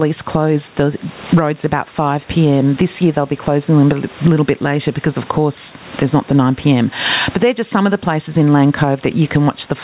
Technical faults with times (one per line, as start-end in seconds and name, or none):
0.00-9.83 gain pumping